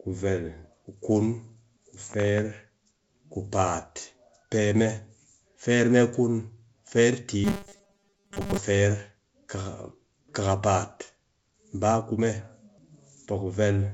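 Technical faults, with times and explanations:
7.44 to 8.58 s, robotic sound from repeated short buffers: just after "kun feer" the speech turns into a rigid, metallic buzz at 200 Hz that still loosely tracks the speech. The likely cause is audio arriving too seldom, so the playback side keeps looping the last chunk, which at 200 Hz fits a 5 ms buffer, while most of the real signal in that stretch is skipped. The G.722 wideband path at 64 kbit/s shows at most faint coding damage.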